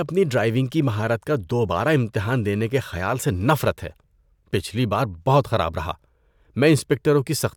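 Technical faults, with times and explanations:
No technical faults detected.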